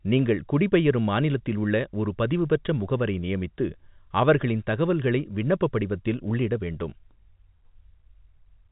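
No technical faults can be heard in this speech, which arrives through ordinary G.711 telephone coding with nothing above 3.8 kHz.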